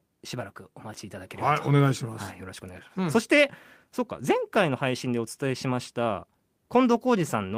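No technical faults can be heard anywhere in the speech recording, without any break or disturbance.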